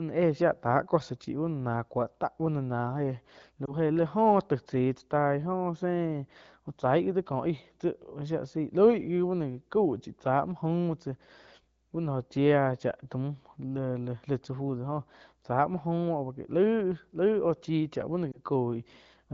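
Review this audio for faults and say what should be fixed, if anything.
Lost AMR speech frames cause two brief warbles, at 3.66 to 3.75 s and 18.32 to 18.40 s. Each is a single 20 ms frame that failed its checksum. The decoder filled the gap by repeating the previous pitch and vocal-tract settings at reduced gain, so the sound briefly smears and dips before recovering. On a spectrogram, the harmonics flatten into a short horizontal smear and then dim. The waveform shows a small amplitude sag. Stronger channel error protection or a better radio link would prevent these losses.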